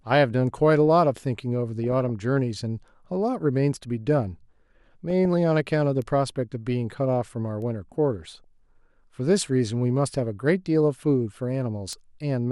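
Speech with two kinds of digital fault. DAB burbling occurs from 1.84 to 2.10 s, 5.10 to 5.25 s and 8.22 to 8.44 s. Weak reception lets a bit error rate of a few tenths of a percent slip past error correction, so short blips of noise appear in single sub-bands over a stretch of the speech. Bit error spikes fall at 6.02, 7.62 and 11.93 s. Each is a single flipped bit in one sample, heard as one sharp, broadband tick that has nothing to do with the speech. It is instantaneous and isolated rather than a gurgling run lasting 0.15 s or more.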